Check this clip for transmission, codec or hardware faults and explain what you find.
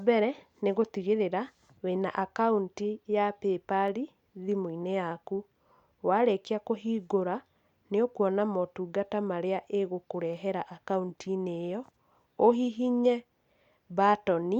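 Two sharp clicks stand out in the speech, at 3.88 s and 10.33 s, each most likely from dropped samples. A handful of samples, a fraction of a millisecond, goes missing, so the waveform jumps abruptly and produces a single click with a thin vertical line across the spectrum.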